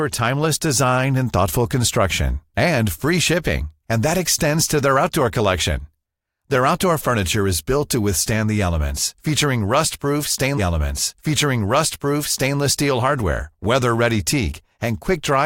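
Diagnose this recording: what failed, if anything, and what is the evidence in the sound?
A stream segment repeated at the playback stage: from 10.57 s to 12.57 s, 2 s of speech plays a second time, with a blip at the jump back. The player queued the same segment twice. On a spectrogram or waveform, that 2 s block appears twice in a row, joined by a discontinuity.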